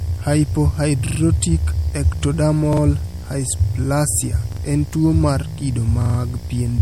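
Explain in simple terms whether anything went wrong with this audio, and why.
Several things went wrong, and they sit on top of each other.

A video or display buzz runs under the speech from start to finish. A screen or video cable has leaked into the audio. You hear it as a low, steady hum at 60 Hz, the rate at which the picture refreshes. It is fairly quiet compared with the speech, but it never stops. A hiss-like hash rides above that hum.

The whole recording also has a washy, metallic quality. That is most likely MP3 compression. To save space, the encoder threw away details it judged unimportant. Here it threw away too much. So the speech sounds watery, and sharp sounds such as s sounds pick up metallic chirps. The very top of the sound is also cut off, above 19.1 kHz.

Finally, there are four repeated buffers. Each is a tiny piece of sound, about 43 ms long, played again several times in a row. 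The player's next batch of audio arrived late, so it replayed the last one. You hear a quick stutter with hard joins. This happens at 1.07 to 1.20 s, 2.73 to 2.82 s, 4.52 to 4.61 s and 6.02 to 6.19 s. The piece repeats three, two, two and four extra times. No speech is skipped. The size of each piece fits a 2048-sample buffer.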